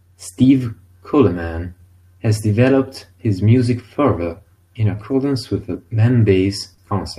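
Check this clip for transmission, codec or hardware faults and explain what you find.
Three related transmission faults are present, all tied to timing between sender and receiver.

Clock drift between sender and receiver runs through the whole clip. The sender's clock runs slow, by roughly 3 percent. The receiver's buffer keeps draining. It must keep adjusting. The result is a faintly unsteady pace across the speech.

Repeated timing corrections run from 0.32 s to 6.31 s. The receiver repeats small pieces to cover the slow sender. Playback effectively runs at 97 percent speed. About a fifth of a second is added overall. The speech drags slightly, with small uneven hiccups.

A short stall from a late packet occurs at 6.74 to 6.80 s. A packet arrived late and the buffer ran empty. The receiver held the last sound for 40 ms, then resumed. Nothing is lost. One sound is briefly stretched, with a slight buzz or dip.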